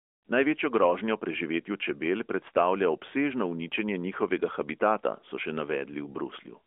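No technical faults can be heard anywhere in the recording. The speech comes through the AMR narrowband mobile codec at 12.2 kbps, confined to a telephone band of roughly 250 Hz to 3.5 kHz, with only light coding damage audible.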